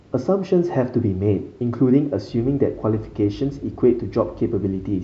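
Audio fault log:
No faults are heard anywhere in the speech. There is nothing to log for any moment of the audio.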